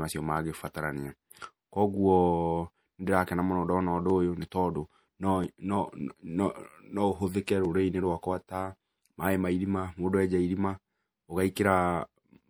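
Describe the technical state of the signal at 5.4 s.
At 5.44 s there is a single sharp click in the speech, most likely from dropped samples: well under a millisecond of the stream is missing, so the waveform jumps straight to a later value. The gap is far too short to remove any sound, and it appears as one thin vertical line across the spectrum. Unlike a dropout or buffer underrun, there is no audible silence or stutter, and unlike periodic clicks, it happens only once.

Around that click, the speech carries MP3 compression damage that is plainly audible. Weak frequency components flicker in and out from frame to frame, giving a watery, swirly texture with metallic chirps on s sounds and smeared attacks. The heaviness of this damage fits a low bitrate of around 64 kbps. It is a continuous colouring rather than a discrete event, which separates it from the click.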